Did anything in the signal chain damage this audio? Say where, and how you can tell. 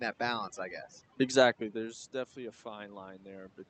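Yes, in the call processing stage. Overdone noise removal runs through the whole clip. Between phrases the room noise drops and breaks up into scattered twinkling specks. The suppressor is set too hard, so it pulls individual frequency bands down whenever they sit near its noise estimate, taking the quiet parts of the voice with them. That separates it from the codec's 8 kHz band limit, which only dulls the top end.

The second fault is automatic gain rising, also in call processing. It starts at 2.12 s, just after "i guess exactly there's", and continues until the clip ends. The input fell by about 15 dB, and the gain control responds by climbing gradually, so speech and the residual background swell together over more than a second. A talker moving, as happens around 1.5 s, changes only the voice level, whereas here the background rises with it.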